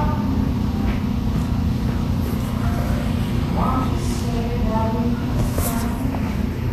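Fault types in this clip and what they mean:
Vorbis compression: The audio was likely squeezed through a low-quality Vorbis encoder, one that keeps only a smooth outline of the spectrum and quantises the fine detail above it very coarsely. The damage is plainly audible and fits a low bitrate of roughly 35 kbps. Nothing survives above 14.2 kHz, and the remaining treble turns into a hissy, grainy wash. Tonal parts sound roughened and sharp attacks lose their edges.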